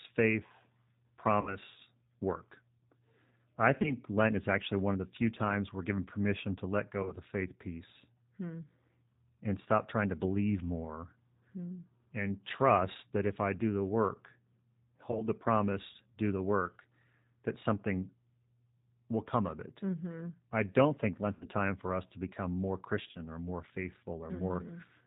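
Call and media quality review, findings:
G.729 codec, whole clip. Speech band-limited, nothing above 4 kHz. Rough, slightly synthetic texture, plainly audible. Cause: 8 kbit/s G.729A encoding, rebuilding speech from a vocal tract filter, pitch predictor and sparse pulses per 10 ms frame.

VoIP packet loss concealed by the speech codec, six events: 1.41–1.56, 3.82–3.94, 7.03–7.13, 15.11–15.24, 21.35–21.46, 23.11–23.20 s. Audio smeared into a fading, stretched sound, then weak recovery. Lost spans 60, 20, 20, 40, 60, 40 ms. These fit one to three 20 ms packets. Decoder extrapolated its last pitch and filter.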